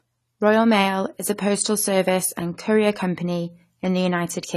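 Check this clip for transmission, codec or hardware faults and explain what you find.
One codec fault runs through the whole clip. The speech sounds dull and smeared, with a swirling, fizzy texture on sibilants and plainly audible damage. Nothing is present above 13.6 kHz. This is likely AAC compression: AAC-LC quantising its frequency lines coarsely and lowering the cut-off, which fits a bitrate around 32 kbps.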